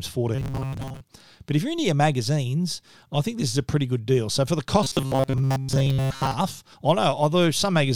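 From 0.35 to 1.01 s, before "but if you're into", and from 4.83 to 6.34 s, after "for the", the speech becomes a metallic 134 Hz buzz. This is robotic sound from repeated short buffers, likely a 7.5 ms chunk replayed over most of each span. A spectrogram shows rigid, evenly spaced harmonic stripes, and the waveform shows identical repeating cycles.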